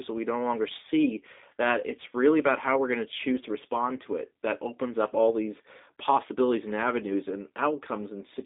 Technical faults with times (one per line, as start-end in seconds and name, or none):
0.00-8.45 G.729 codec